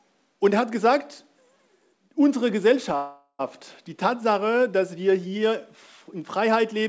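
From 2.96 to 3.42 s a call audio freeze holds the sound, likely from delayed packets draining the jitter buffer. A fading buzz fills about 0.43 s, then about 60 ms of silence, and the audio resumes intact but 0.43 s late. A spectrogram shows smeared bands decaying to a blank strip, and the waveform tapers to a flat line. Above it all, the spectrum stops at 8 kHz, which fits a wideband G.722 call codec.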